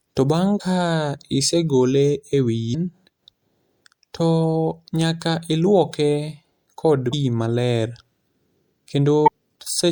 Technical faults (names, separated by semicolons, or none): damaged data in a compressed stream